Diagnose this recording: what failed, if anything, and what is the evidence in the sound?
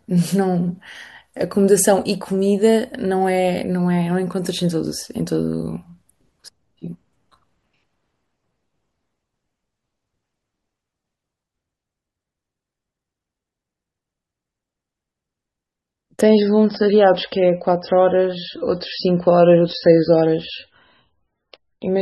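At the network stage, an adaptive stream at a lower bitrate took over from 16.21 s to the end: the speech abruptly loses everything above 5.6 kHz, with no gap. A spectrogram shows a sharp horizontal ceiling, consistent with a switch from roughly 128 kbit/s MP3 to around 13 kbit/s.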